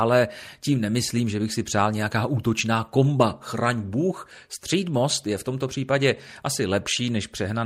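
No technical faults are audible.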